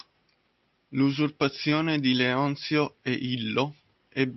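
Between 1.69 and 1.85 s, short concealed packet loss: about 20 ms of audio arrived too late, and the receiver extrapolated the preceding sound before crossfading back, heard as a quick wobble.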